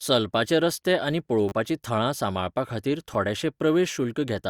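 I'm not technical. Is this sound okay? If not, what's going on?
No. There are two tiny glitches. At 1.49 to 1.52 s, right after "चलपाचे रस्ते आनी", a sliver of the speech repeats several times in quick succession, giving a short buzzy stutter. At 3.14 s, after "थळां सांबाळपाखातीर", a single repeat makes a brief click. This is a repeated buffer: fresh audio arrived late, so the player replayed its last chunk, which sounds like pieces about 10 ms long.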